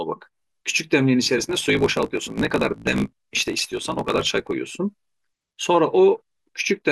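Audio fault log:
1.37–4.54 s: block size mismatch (truncated). One stage writes longer blocks than the next stage reads, so the tail of every block is dropped and the joins fall at a steady rate. Each cut leaves a small step in the waveform, heard as a buzz at about 54 Hz, with 1024 samples written per block. Losing part of every block makes the speech run about 1.16 times faster, while its timbre stays.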